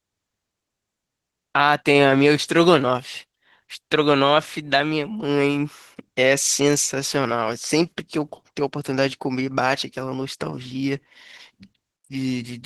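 From start to finish, the speech carries Opus voice compression damage. The sound points to a low rate around 16 kbps in hybrid mode. A linear-prediction layer codes the lower band coarsely, and a thin upper layer fills the top. Voices sound hoarse and slightly robotic.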